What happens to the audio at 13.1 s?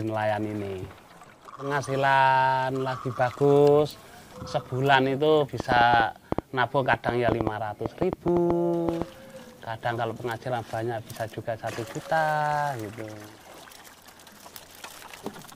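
Nothing goes wrong at 13.1 s; the audio there plays through intact, with no dropout, glitch or other fault.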